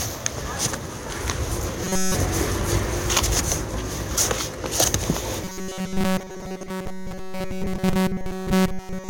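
Audio likely arrived too slowly, so playback kept repeating one short buffer, about 5.3 ms, in place of fresh material. From 1.84 to 2.15 s, and again from 5.44 s to the end at 9.10 s, the sound turns into a rigid, metallic 188 Hz buzz: robotic sound from repeated short buffers.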